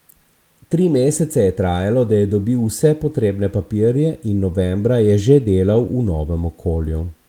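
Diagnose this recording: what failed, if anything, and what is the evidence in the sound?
Nothing failed in this recording, and the sound gives no evidence of a fault at any stage.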